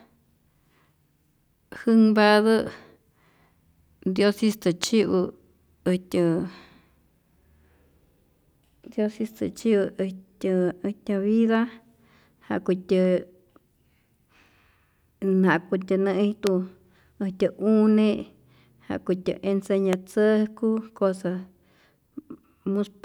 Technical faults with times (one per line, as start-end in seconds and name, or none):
4.84-4.86 loud pop
16.47-16.49 loud pop
19.93-19.95 loud pop